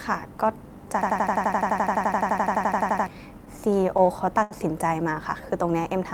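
From 1.02 to 3.07 s a system hang loop takes over. The computer or its audio driver stopped supplying new samples while the playback hardware kept reading the same ring buffer, so one 85.33 ms slice of speech repeats 24 times. That length fits a 4096-sample buffer. At 11.7 repeats per second the result is a hard, mechanical machine-gun stutter, and roughly two seconds of the speech that should have played there is never heard.

From 3.45 to 4.53 s come repeated stalls (stutter). Packets reached the receiver late, or slower than playback consumed them, so its jitter buffer ran dry seven times. At each gap the receiver extended the last sound until data resumed, filling 144 ms in total, about 13% of that stretch, with the longest hold lasting 81 ms. No speech is actually lost, but delivery drags and catches in small hitches.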